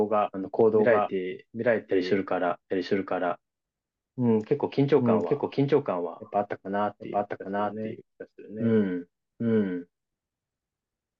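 A doubled audio track runs through the speech: an equally loud, dry copy trails about 0.7 s behind, likely from a second, slower capture path.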